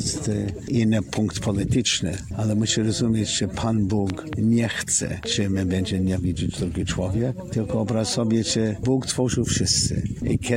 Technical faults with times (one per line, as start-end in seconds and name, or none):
4.10-4.35 loud pop
5.23-5.25 loud pop